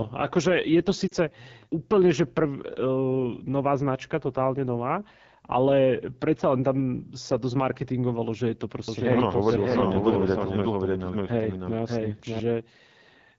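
Throughout, the speech sounds rough and raspy. That is AMR wideband (HD Voice) codec damage, and it fits a low rate of about 8.85 kbit/s.

From 1.07 to 1.13 s the sound briefly smears and dips, the effect of lost AMR speech frames. The gap is about 40 ms, which fits two dropped frames that the decoder covered by repeating and fading its last good settings.

From 8.88 to 12.4 s a flat, roomless copy of the speech trails about 0.7 s behind, some 5 dB quieter, and starts and stops abruptly. This doubled audio track is likely a second capture of the same signal through a slower path.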